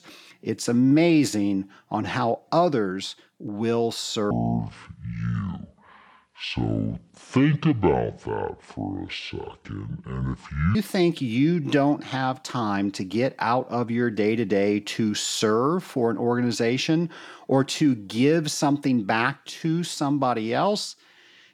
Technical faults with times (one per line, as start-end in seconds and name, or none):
4.31-10.75 section at the wrong speed